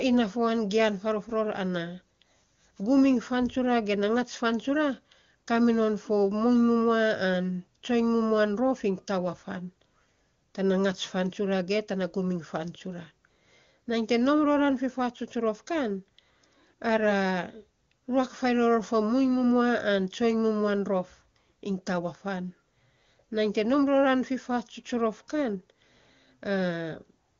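No technical faults are audible.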